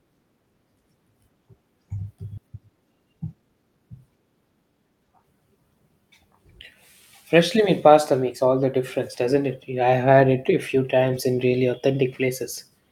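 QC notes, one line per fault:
2.37–2.39 s, skip ahead: The speech lurches forward with no pause, as if roughly 0.7 s of talk has vanished and the two sides are spliced straight together. Later audio was already queued, so the receiver discarded a stretch of it, either lost in transit or dropped when the jitter buffer overflowed. Nothing was inserted to cover the jump, which is why the cut is abrupt rather than a silence or a smear.
2.47–3.78 s, jitter buffer speed-up: For just over a second the talking sounds hurried, running about 13% fast while the pitch stays where it was. After the jump, the buffer was still holding more audio than its target, so the receiver trimmed it down by cutting out many tiny slices of one or a few pitch periods each, around 150 ms in total. Because whole periods go, the tempo rises but the pitch does not.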